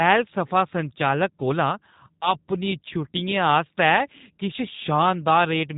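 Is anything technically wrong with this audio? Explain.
Yes. Throughout, the speech sounds slightly rough and synthetic, with nothing above about 3.8 kHz. This is G.729 codec damage, which fits an 8 kbit/s stream rebuilt from a vocal tract filter and sparse pulses.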